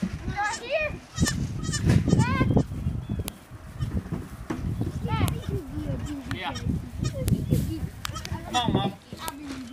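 Joined two-second pieces kept their WAV headers, so header bytes played as audio: a sharp snap at 1.28, 3.28, 5.28, 7.28 and 9.28 s.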